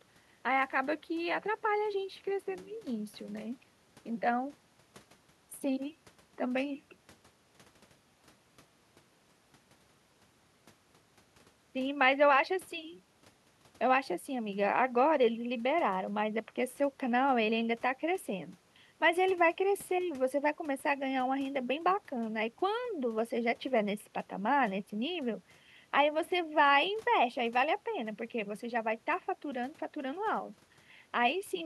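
No audible technical faults.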